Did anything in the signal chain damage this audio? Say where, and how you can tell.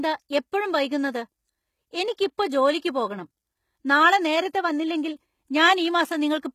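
Yes, at the codec stage. Throughout the speech the treble is not genuine: sibilants sound gritty and lispy, and the top band does not follow the harmonics below it. That is likely HE-AAC compression with spectral band replication rebuilding the highs from copied lower bands, which fits a low bitrate of around 20 kbps. A spectrogram shows a hard ceiling with nothing above 14.9 kHz, and repeated, blocky texture in the upper region.

The codec also causes pre-echo from 2.16 to 2.18 s, a short hiss lasting about 21 ms that arrives just ahead of a sharp onset and leaves that attack sounding softened. The transform spread quantisation noise scaled for the loud attack across the whole block, including the quiet stretch before it. On a waveform, low-level noise appears where there should be silence before the transient. A spectrogram shows a broadband smear leading into the onset.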